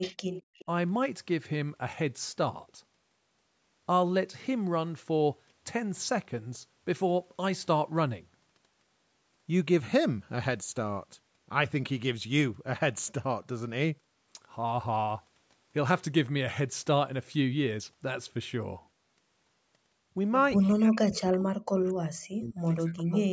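A speech recording in which an echo canceller at a loudspeaker end was likely letting through part of what its microphone picked up, producing echo leak: faint delayed copies of the talker at 0.01–0.16 s, 0.32–0.42 s and 0.58–0.65 s, trailing by 206 ms at about 15 to 25 dB below the speech, and again at 20.64, 21.86 and 22.98 s, trailing by roughly 240 ms at about 20 to 30 dB down. From 20.57 s to the end, both sides talking at once likely made the canceller clamp down on the talker as well, so speech suppressed in double talk breaks the voice into dips and dropouts totalling around 2 s, falling as deep as roughly 40 dB.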